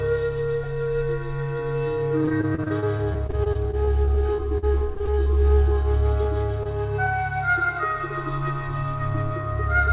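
The whole clip has a channel delay causing comb filtering: one side lags by about 3 ms before the mono sum, cutting regular notches from around 200 Hz, so everything sounds hollow and phasey. From 2.22 to 5.28 s there's repeated packet loss, and the sound turns choppy as dozens of holes, the longest 44 ms, get patched with about 17% of that stretch concealed. Then come two short concealed packet losses, 6.23 to 6.27 s and 6.63 to 6.67 s. Each is a 20 ms gap filled by extending the previous sound, heard as a brief smear or wobble. The G.711 call path's cutoff at 4 kHz is audible throughout as the usual narrowband top end.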